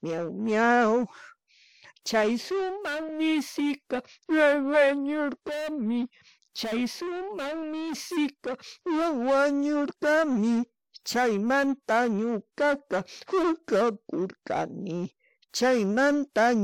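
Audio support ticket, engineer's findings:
Speech track reviewed in full, no audible defects found, no fix required.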